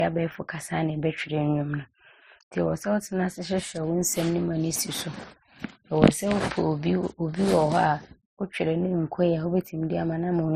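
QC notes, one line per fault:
Throughout, transcoding between lossy codecs. The speech carries two layers of compression damage at once. The artefacts of a low-rate MP3, around 35 kbit/s, sit under those Opus adds. The later codec spends some of its bits reproducing the earlier artefacts. Nothing is heard above 15.7 kHz. This cut-off survives the chain. An MP3-then-Opus path is the likely cause.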